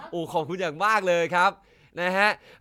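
Nothing in the signal of this short speech recording points to a technical fault at any point.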